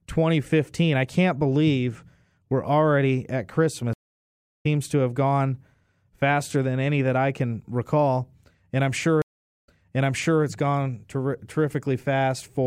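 At 3.93 s, after "believe we're already at", a stream reconnect cuts the speech for about 0.69 s. The connection dropped, the player rebuilt its decoder mid-stream, and playback resumed roughly 0.7 s further on, so some speech is skipped before "to have gone faster". A second reconnect at 9.22 s, after "recall and I'm sure", leaves 0.43 s of silence, then restarts 0.78 s earlier, repeating resent material before "it's gone". Each restart enters muted or fading in.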